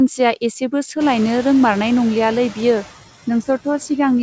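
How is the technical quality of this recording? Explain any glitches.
The recording has one processing fault, present from start to finish: noise suppressor artifacts.

Noise suppressor artifacts run through the whole clip. The suppressor estimates which frequency bands hold steady background noise and turns them down, frame by frame, by about 12 dB. Between phrases the noise drops away, then comes back up underneath the speech. Unlike a noise gate, which snaps to near silence, this leaves a reduced residue rather than a clean cut.

The room noise jumps by about 20 dB at roughly 1 s and then sits about 17 dB below the speech. That step is a real change in the room, not the suppressor pumping. Nothing is heard above 8 kHz, which fits the G.722 call codec.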